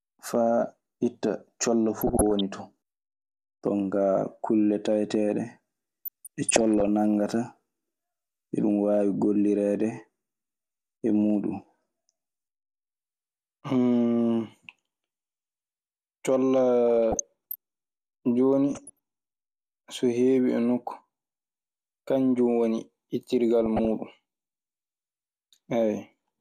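Speech carrying DAB burbling at 2.0–2.41, 6.05–6.88, 16.88–17.55, 18.72–18.99 and 23.62–23.91 s. Weak reception let bit errors of roughly 0.4 to 1 percent past error correction, making individual sub-bands jump frame by frame. Unlike a dropout's silent gaps, the sound keeps going under short blips of noise.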